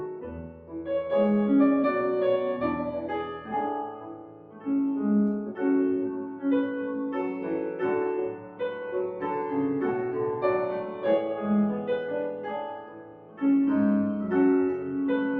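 A speech-tuned noise suppressor applied to music or sounds runs throughout, treating sustained material as noise so levels pump by roughly 10 dB. Attacks survive while held sound and tails sink. Sound cut by the noise suppressor dips by up to about 9 dB at 0.12–0.74, 3.9–4.67, 8.33–8.6, 10.84–11.04, 12.32–12.52 and 12.74–13.42 s.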